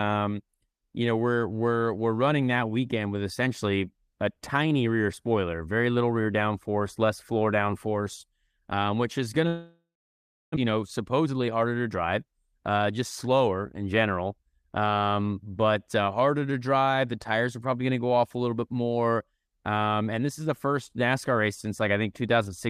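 Right after "um which is going", from 9.47 to 10.67 s, the sound smears into a fading buzz, then goes silent for about 0.7 s, likely a long network dropout. Then, 11.19 to 11.48 s, a jitter buffer speed-up trims roughly 50 ms of pitch periods, so the speech rushes at 113% with unchanged pitch.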